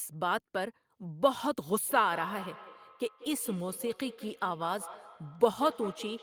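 From 1.8 s to the end of the clip, the speech carries feedback echo between two devices. A second device in the same room is on the call and plays back what this microphone sent, and the microphone picks that playback up again. The local echo canceller only removes its own device's output, so the returned sound passes through. It is heard as a repeat of the speech roughly a fifth of a second behind, peaking at about 14 dB below the direct speech.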